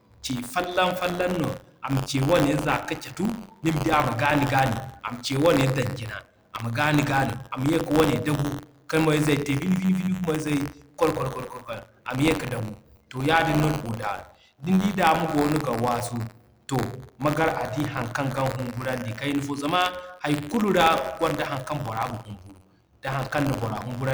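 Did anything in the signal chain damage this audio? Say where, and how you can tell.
Yes: a steady robotic buzz near 93.8 Hz rides on the speech throughout and vanishes in silences. That is buffer tearing at the driver or buffer stage, where writer and reader cross, splicing a small slice of audio some 40 ms old into each period, which fits a 512-sample buffer.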